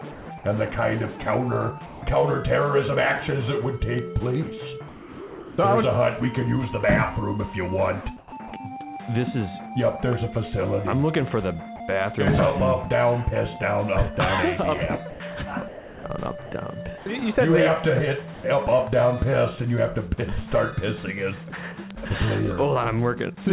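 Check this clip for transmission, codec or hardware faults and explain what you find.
Three kinds of fault turn up: voice-detector dropouts, voice-detector chopping, and bit error spikes, all carried over a call path band-limited at 4 kHz, which fits G.711 mu-law at 64 kbps.

Sound dropped by the voice detector, at 0.12–0.26, 1.86–2.02, 4.88–5.58, 18.34–18.44 and 21.50–21.52 s: the sender likely judged real sound as background and stopped transmitting. Comfort noise fills the gap, the longest lasting 0.7 s.

Sound chopped by the voice detector, at 8.18–8.52 and 15.1–17.06 s: the detector likely toggled repeatedly. Fragments vanish into comfort noise, making the sound choppy.

Bit error spikes, at 3.99, 12.38 and 21.91 s: a flipped bit throws one to three samples sharply off. Each is heard as a single broadband tick.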